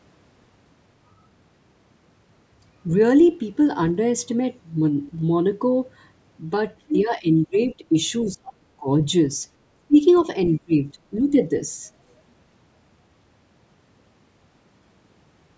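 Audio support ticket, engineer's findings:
Other side's voice leaking through, 6.88–6.97 s and 10.15–10.25 s: short scraps of a second talker, the first only about 5 dB under the near voice, the second faint, near 25 dB down. Likely loudspeaker echo the echo canceller failed to remove.

Speech suppressed in double talk, 6.92–7.30, 7.46–7.94, 8.27–8.88, 9.74–9.98 and 10.53–11.42 s: near voice dips and cuts out in pieces, from about 10 dB to about 35 dB down. Likely the canceller attenuating everything while both sides talked.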